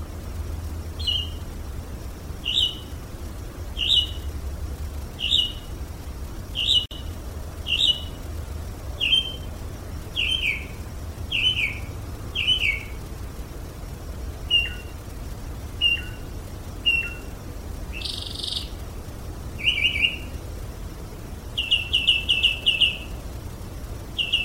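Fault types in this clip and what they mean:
Gap at a join of encoded pieces: the audio was evidently encoded as separate sections and spliced back together without trimming the silent padding each encoder pass leaves at the start and in its final frame. At about 6.86 s a hole of roughly 52 ms opens in otherwise continuous sound, running to about 6.91 s. Its edges are smeared by the codec, so the truly silent part is shorter, and the sound resumes exactly where it broke off, with nothing missing.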